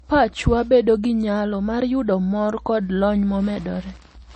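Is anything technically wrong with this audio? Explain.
Yes. Throughout, nothing is present above 8.3 kHz, likely low-bitrate audio saved at a high bitrate: an early MP3 pass near 32 kbit/s removed content that the later high-bitrate re-encode cannot restore.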